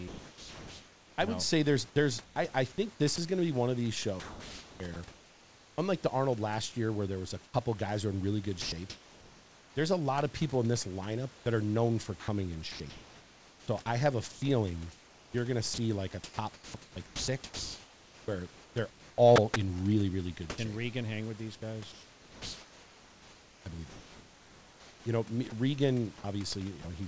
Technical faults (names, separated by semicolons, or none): sound chopped by the voice detector; sound dropped by the voice detector; comfort noise in place of the background